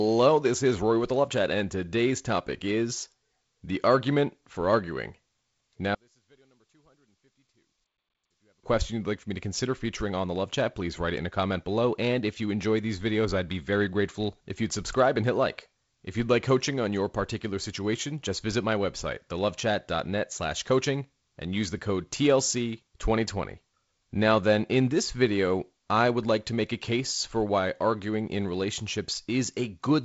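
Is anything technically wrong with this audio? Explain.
Yes. From 5.95 to 8.63 s the speech falls by about 38 dB to a faint trace, likely one channel inverted cancelling the other in the mono sum.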